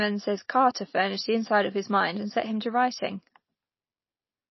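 From the very start and through the whole clip, the speech has plainly audible damage consistent with MP3 compression, likely from a low-bitrate encode, something like 24 kbps. There's nothing above 5.8 kHz, so the encoder has chopped the treble at a fixed point. Starved of bits, it also drops the weaker frequency detail, letting it flicker in and out between frames, which gives the speech that watery, swirly quality and dulls the s sounds.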